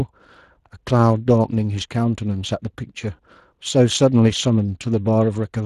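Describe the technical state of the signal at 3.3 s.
Speex codec damage is what you're hearing there, and it isn't local to 3.3 s; it runs through the whole clip. Speex is a CELP coder, so it models the speech with a predictive filter and spends a limited budget on the excitation signal driving it. The damage is plainly audible here, and the roughness points to a Speex stream at about 22 kbps, a setting that leaves the speech sounding grainy, noisy and somewhat hoarse.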